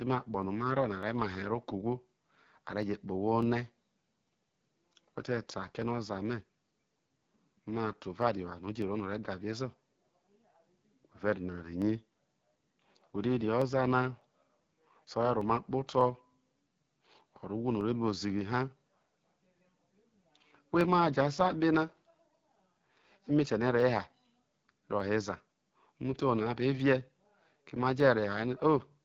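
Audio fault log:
Throughout: AMR wideband (HD Voice) codec. The speech is coming through at 8.85 kbit/s, one of the codec's two lowest rates, so it sounds rough and raspy. Nothing gets past about 7.3 kHz, and the top band is filled with shaped noise rather than real detail.
0.43 to 28.6 s: Clock drift buffer slips. There's a regular click every 0.6 s, around fifty in all. That's likely two clocks disagreeing by something like 500 ppm, with the buffer dropping or repeating a small block of roughly fifteen samples each time it runs over or dries up.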